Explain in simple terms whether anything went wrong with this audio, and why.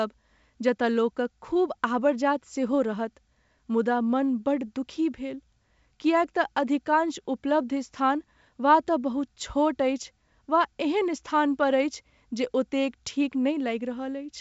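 Nothing went wrong with this speech recording. It was carried over a wideband G.722 phone line, which is why the sound stops at about 7.7 kHz and lacks the very highest treble, and the coding leaves at most a faint trace.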